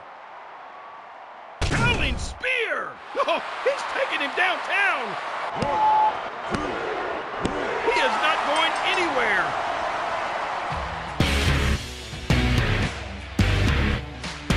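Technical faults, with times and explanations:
5.44–6.14 s, loudspeaker feedback squeal: a microphone picked up the loudspeaker it was feeding, and at 862 Hz the gain around that loop rose above one, so the tone fed itself on each pass. It swells from nothing to a steady whistle in under half a second and ends up a few decibels louder than the rest of the sound. The squeal stops at 6.14 s, when the loop was broken.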